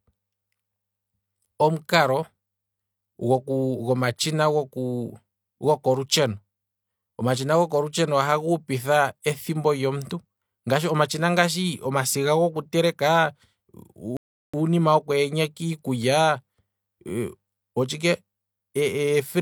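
At 14.17 s the speech halts in a rebuffering stall: playback ran dry of downloaded audio and froze for about 0.37 s, then resumed exactly where it left off. The waveform shows a flat gap, and the spectrogram shows a blank vertical band with no missing content.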